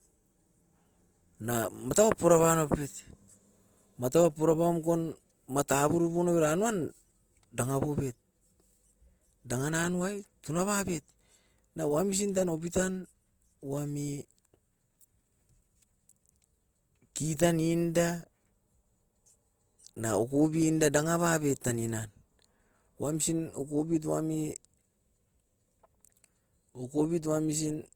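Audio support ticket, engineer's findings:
Opus compression throughout. Speech grainy, rough, noisy-toned. Likely CELT mode filling starved bands with noise, fitting about 24 kbps. Full bandwidth, up to 20.1 kHz.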